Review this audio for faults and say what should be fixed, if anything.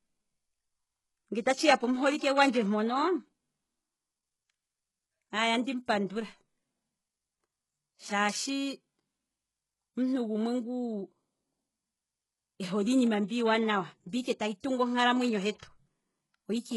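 The whole clip carries heavy damage that is likely from HE-AAC compression. Nothing sounds above 11.5 kHz. The treble that remains is rebuilt from lower bands, not coded directly. So its harmonics do not line up with the speech below the crossover. S sounds come out gritty and metallic. The degree of damage fits a very low bitrate, around 12 kbps. To prevent it, encode at a higher bitrate with a full-band codec such as AAC-LC.

Pre-echo occurs twice. The first is at 14.60 to 14.64 s, lasting 34 ms, between "mbi ike tayi" and "tungu onkalamwenyo". The second is at 15.59 to 15.63 s, lasting 39 ms, just after "ike tayi tungu onkalamwenyo". In each case the codec spread its noise across a whole block. That noise was sized for a sharp attack late in the block. A short hiss therefore leads each onset, and the attack sounds smeared. To prevent it, use a higher bitrate or an encoder with good block switching for transients.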